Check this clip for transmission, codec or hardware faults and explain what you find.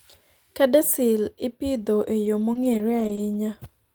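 There's one transmission fault, scattered short gaps in the speech between 2.25 and 3.35 s, just after "ipidho e". A handful of tiny holes, the longest around 20 ms and about 80 ms in all, were patched by stretching the preceding sound, so you hear brief ticks and little smeared hiccups.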